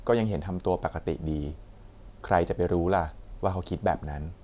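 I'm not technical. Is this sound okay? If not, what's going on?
Yes, nothing stood out as a problem when listening to this recording.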